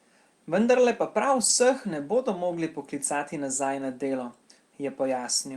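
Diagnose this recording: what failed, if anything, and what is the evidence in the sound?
Network stage, recovered by the codec: from about 1.45 to 1.51 s the speech turns briefly rough and noisy, but there's no gap. That's a lost packet rebuilt from error correction. The decoder played the low-bitrate copies carried in the following packets, which fits two lost 20 ms packets.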